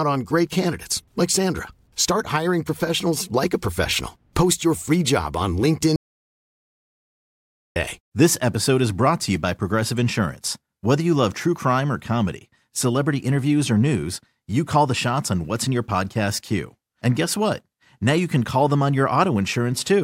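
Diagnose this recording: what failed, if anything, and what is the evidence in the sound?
Audio dropout to silence from 5.96 to 7.76 s, just after "your free job on": 1.8 s of silence with no room tone, likely a lost input or link upstream of the recorder.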